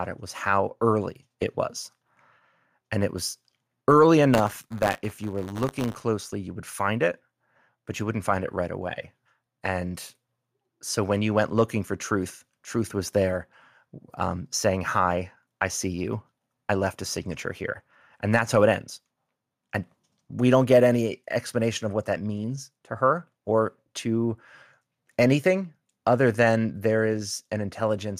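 From 4.33 to 6.02 s the speech shows buffer tearing. The software filling the ring buffer and the hardware draining it have drifted out of step, so their positions cross inside every period. A small slice of each buffer still holds audio from a few tens of milliseconds earlier, butted against the current audio with hard joins. The result is a steady robotic rattle at 100 Hz, which fits a 10 ms buffer period, heard only while speech is present.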